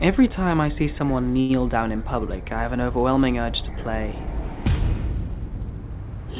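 A short stall from a late packet hits at 1.40 to 1.52 s: the sound freezes and is held for about 92 ms before resuming where it left off, with nothing lost. A spectrogram shows flat, smeared harmonics across that stretch, and the waveform shows a repeating cycle, all below a hard 4 kHz ceiling consistent with a narrowband call codec.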